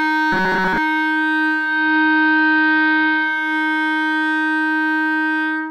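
Robotic sound from repeated short buffers runs from 0.32 to 0.78 s, where the music collapses into a rigid metallic buzz at 188 Hz. Most of that stretch is likely audio arriving too slowly, with the player looping a fragment of roughly 5.3 ms to cover the gaps.

Digital radio blending to analogue runs from 1.49 to 3.55 s. The signal cross-fades over 484 ms to the station's AM broadcast, shifting level by about 3 dB, and bringing up hiss well below the music before blending back.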